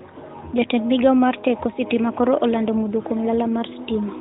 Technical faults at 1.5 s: none

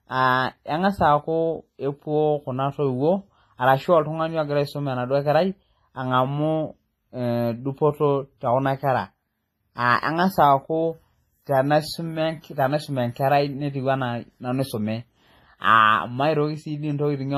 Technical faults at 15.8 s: WMA compression

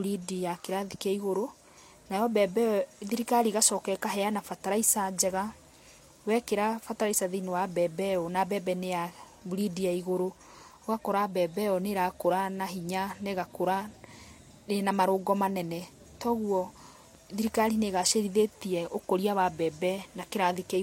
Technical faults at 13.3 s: transcoding between lossy codecs

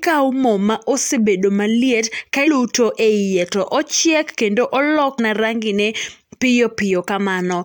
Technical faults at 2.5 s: damaged data in a compressed stream

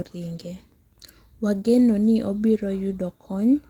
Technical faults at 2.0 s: none

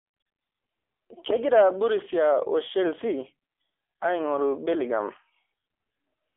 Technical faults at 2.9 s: AMR narrowband mobile codec

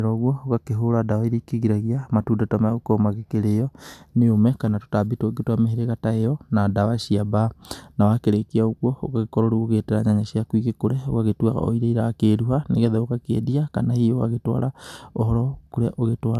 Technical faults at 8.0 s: none

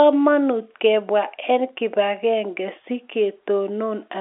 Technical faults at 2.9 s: none

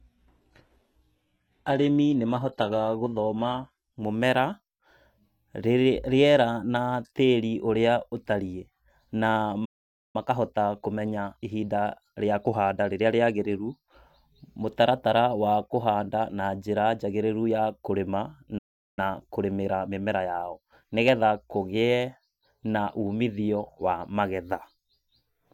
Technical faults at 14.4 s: none

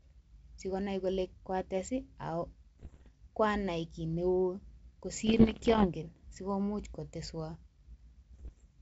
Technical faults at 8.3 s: bit errors on an ADPCM link

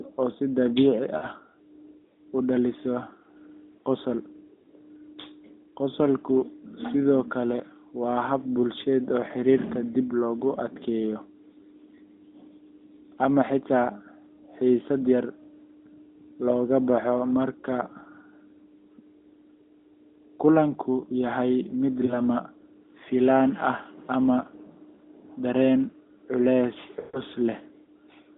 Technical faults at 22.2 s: lost AMR speech frames

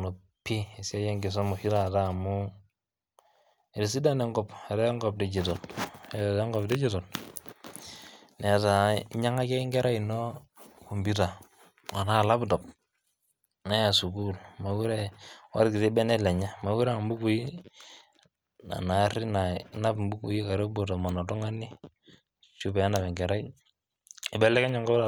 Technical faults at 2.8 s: none

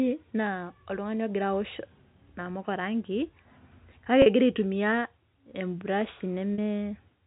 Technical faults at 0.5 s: none

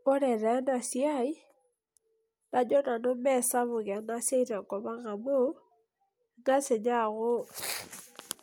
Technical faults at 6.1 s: none

